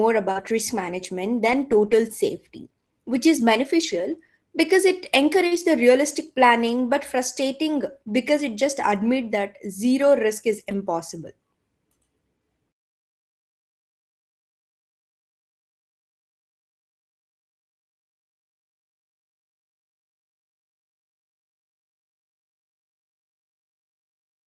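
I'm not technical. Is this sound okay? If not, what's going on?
No. Around 0.31 to 0.37 s and 5.47 to 5.53 s there are brief smears or wobbles. This is short concealed packet loss: about 40 ms of the call arrived too late, so the receiver stretched the preceding sound to cover the hole.

Right after each of those, at 0.35 to 0.41 s and 5.51 to 5.57 s, and as single moments at 1.51, 3.83, 6.89 and 10.71 s, the sound turns rough and hissy. These are lost packets rebuilt from error correction. The next piece of data carried a lower-quality backup copy of the missing one, and that copy was played instead, so nothing drops out.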